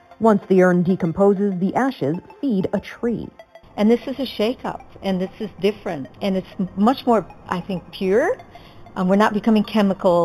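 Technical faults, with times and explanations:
Throughout, imaging from linear upsampling: the sound points to audio originally at an 8 kHz rate being raised to 48 kHz by joining samples with straight lines. That crude interpolation barely filters, so the band just below 4 kHz is dulled while a mirrored copy of the spectrum survives from 4 to 8 kHz, roughly 30 dB under the signal. It comes across as a faint metallic shimmer on sharp, bright moments.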